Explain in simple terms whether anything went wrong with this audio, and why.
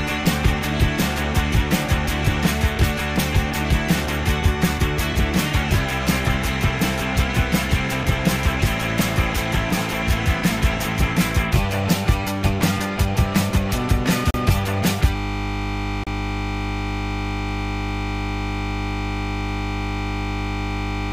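Two things go wrong here.

The first is a Bluetooth stall. At 14.31 s the sound drops out for 36 ms, then carries on. It happens again at 16.04 s, this time for 32 ms. These are tiny gaps of pure silence. The likely cause is wireless interference. Audio packets arrived late, the headphones ran out of sound to play, and they paused until the missing data showed up.

The second is a system hang loop. From 15.16 s to the very end, the sound gets stuck. One 20 ms slice of audio repeats over and over, about 50 times a second, hundreds of times in a row. Because the slice is so short, it doesn't sound like a stutter. It becomes a steady buzz. This happens when the computer or its audio driver freezes but the sound hardware keeps replaying the last bit of audio it holds.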